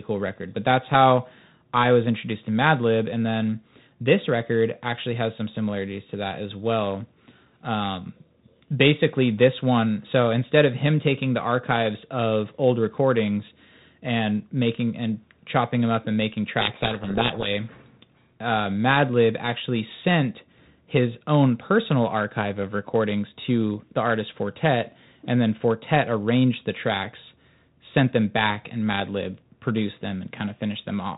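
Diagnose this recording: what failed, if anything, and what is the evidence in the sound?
The codec stage slipped briefly. Right after "them up and making", from about 16.6 to 17.48 s, the speech drops into harsh, gritty distortion and you can barely follow it. That's a codec payload misread. The link is G.726 at 32 kbit/s, which only adds light coding damage everywhere else, but here the decoder is reading each code word with its bits in the wrong order. The sample differences come out wrong, so the prediction wanders until both ends agree on the packing again.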